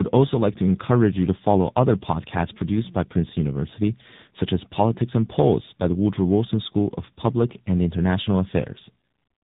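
From start to finish, the speech carries tandem speech coding. It passed through two low-rate speech codecs in a row, decoded and coded again at each step. The roughness points to an ADPCM stage near 24 kbit/s feeding AMR-NB near 7.95 kbit/s. The second coder worked on sound the first had already damaged, so errors stacked. Nothing reaches above 3.8 kHz. The speech sounds muffled and gritty, with a watery warble.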